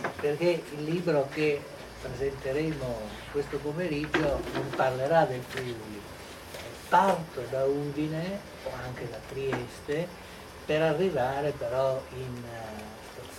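No faults are audible anywhere in the recording.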